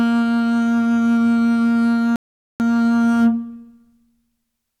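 A rebuffering stall runs from 2.16 s to 2.60 s in this music. Playback drained its store of downloaded audio and halted until more data arrived. The music drops abruptly into silence and then picks up at exactly the point where it broke off, so no musical material is skipped or repeated. The gap simply inserts about 440 ms of dead air, stretching the clip's timeline by that amount.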